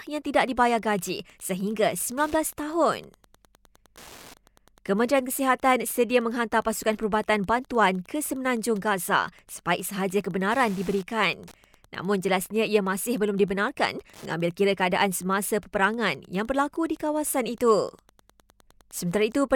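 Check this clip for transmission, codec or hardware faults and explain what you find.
One hardware fault is present. Wi-Fi interference runs throughout the speech. A nearby Wi-Fi radio's beacon, every 102.4 ms, is rectified by the audio circuit. This gives a steady tick about ten times a second, around 30 dB below the voice.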